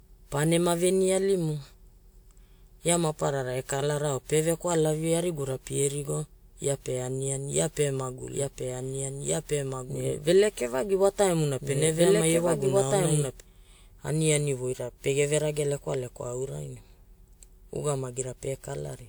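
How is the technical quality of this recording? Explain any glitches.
The recording has two clear technical problems: a smeared, hollow codec character throughout, and a stretch where the speech is heard twice over.

Generation loss runs through the whole clip and is the likely cause of the swirly, hollowed-out texture. Each time lossy audio is decoded and re-encoded, the codec quantises it again on a shifted frame grid, so noise and spectral gaps build up pass after pass. The result sounds worse than a single encode would, with soft, blurred consonant attacks. The artefacts fit a WMA-style codec around 128 kbit/s applied about four times, and nothing is present above 20.1 kHz.

A doubled audio track appears from 8.24 s to 13.40 s. A second full-band copy of the speech plays roughly one and a half seconds behind the original, at about the same level, so two overlapping streams of speech compete. 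The likely cause is the same signal reaching the mix twice, through a slower second capture path or an edit that left two offset copies. The copy carries no reverb or room colour, and it cuts in and out abruptly at both ends.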